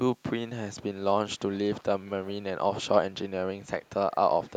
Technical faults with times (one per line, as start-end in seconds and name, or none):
3.85-3.90 echo leak
4.48-4.53 echo leak